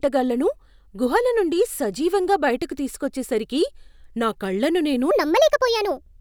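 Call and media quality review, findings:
Section at the wrong speed, 5.11 s to end of clip. Speech abruptly high and hurried, 1.37x fast, pitch up about five semitones. Likely resampling or playback-clock mismatch in editor/player. Spectrogram: harmonics and formants jump upward, wider spacing at 5.11 s. Waveform: cycles and syllables visibly compressed in time.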